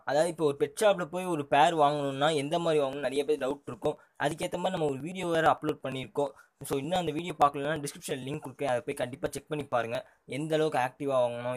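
Regular ticks sound every 0.115 s from 2.93 s to 10.18 s, each skipping around 10 ms of audio: periodic USB or driver dropouts.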